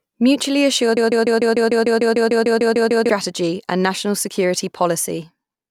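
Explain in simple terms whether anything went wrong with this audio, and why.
The playback or stream most likely stalled and kept replaying the last scrap it held, a broken-record loop. From 0.97 to 3.10 s, a 0.15 s piece of speech repeats 14 times back to back, and the speech meant for that stretch is lost before "and national security".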